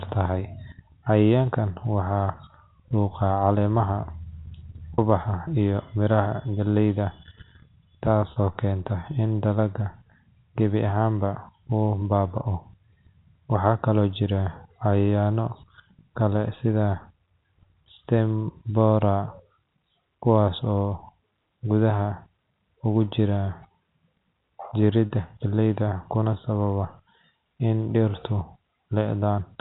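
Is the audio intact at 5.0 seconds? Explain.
No, a brief held, buzzy note runs from 4.94 to 4.98 s: packet loss with pitch repetition, where about 40 ms went missing and the last pitch period was repeated to fill it.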